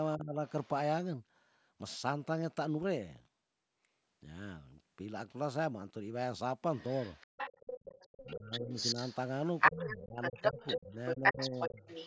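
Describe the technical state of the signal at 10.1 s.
At 10.1 s the other side's voice is leaking through, from 6.74 s to the end of the clip at about the same level as the talker. The cause is likely an echo canceller that failed to remove the far end picked up from the device's loudspeaker.

The same moment also falls within speech suppressed in double talk, from 9.71 to 11.82 s. With both sides talking, the talker's voice drops in pieces, by up to around 20 dB and for about a second in all, likely because the echo canceller attenuated the mixture it could not separate.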